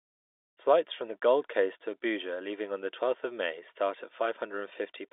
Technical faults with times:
none

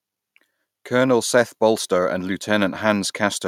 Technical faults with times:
none

